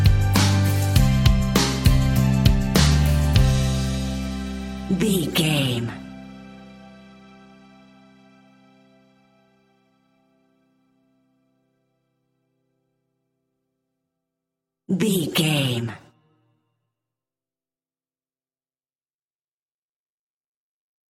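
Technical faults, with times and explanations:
Nothing stood out on listening to this recording.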